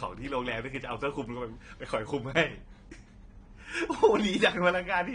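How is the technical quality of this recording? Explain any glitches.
The recording has clearly audible codec damage that runs through the whole clip, pointing to AAC compression as the likely cause. Nothing is present above about 9.7 kHz, so the speech sounds dull, and sibilants have a fizzy, warbling texture. At a low bitrate, consistent with around 32 kbps for AAC-LC, the encoder drops high bands and coarsely quantises the remaining ones. A plain low-pass filter would give the same dull top without any of that swirling artefact.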